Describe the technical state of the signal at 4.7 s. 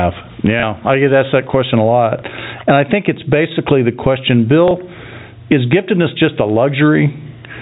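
At 4.7 s there is a brief packet loss with the last packet repeated, spanning 4.68 to 4.71 s. About 30 ms of audio is missing, which fits a single lost packet. The receiver replays the previous chunk to fill the gap, and the repeat produces a small blip.

The same moment also carries gain pumping, present across the whole clip. The gain swings by around 15 dB, and dynamics sound squashed. The likely cause is excessive input gain with a fast limiter or compressor pulling it down on every peak. The G.711 telephone band limit at 4 kHz is audible here as well.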